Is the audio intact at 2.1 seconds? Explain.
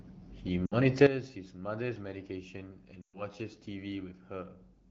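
No. At 2.1 seconds the audio sits inside a sudden gain jump that begins at 1.07 s and lasts to the end of the clip. At its onset the level drops by about 13 dB, and the speech and the background noise fall together. There is no fade between the two levels. The likely cause is a digital gain setting applied without a ramp, so the level changes from one sample to the next.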